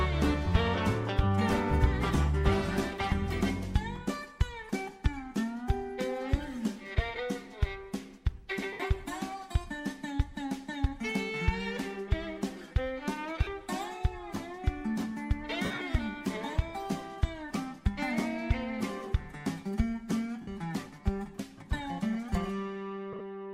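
Lost LE Audio frames at 3.10, 8.73 to 8.80, 13.43 to 13.47, 15.65 to 15.82, 20.41 to 20.48 and 23.13 to 23.21 s. The decoder patches each gap with recycled, sign-scrambled spectrum, so the sound smears into brief noisy blurs.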